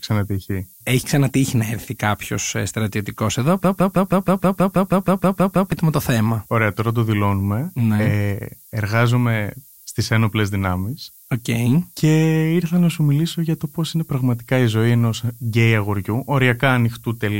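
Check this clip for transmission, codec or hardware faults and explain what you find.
Two faults are present in this speech clip. Throughout, the clip suffers from low bit depth with noise shaping: 8-bit quantisation with its rounding error pushed upward leaves a steady, thin hiss, about 25 dB below the speech, that climbs toward the treble. From 3.64 to 5.72 s there is a broken-record loop: a stalled player, encoder or stream likely resent its last 0.16 s fragment 13 times back to back, producing a rapid stutter while the speech of that span is lost.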